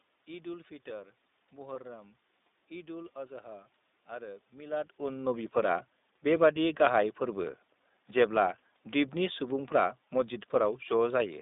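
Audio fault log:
throughout: iLBC codec. The narrowband VoIP coder, with a rough, synthetic grain consistent with its 15.2 kbps mode, squeezes the speech into a line band from 200 Hz to 3.7 kHz. Each 20 ms block is coded on its own, and with nothing above the band consonants lose sparkle.
1.74 to 1.76 s: lost iLBC frames. About 20 ms of audio failed to arrive, consistent with a single dropped 20 ms frame. The decoder filled the hole by repeating the last pitch cycle blended with noise, heard as a brief held, slightly buzzy vowel, and the speech recovers immediately afterwards.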